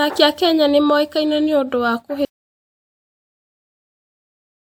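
At 2.25 s the speech cuts off abruptly in an audio dropout to silence that runs to the end, with no room tone at all. The input was likely lost while the recorder kept writing zeros. The waveform is a flat line there, and the spectrogram is blank.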